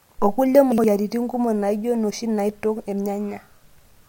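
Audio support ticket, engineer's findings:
Chunks out of order, 0.72 to 0.84 s. Brief jumbled stretch. Two 60 ms chunks swapped, one delivered one chunk late and played after its successor. No loss, three hard boundaries. Suspect jitter buffer or write-queue ordering.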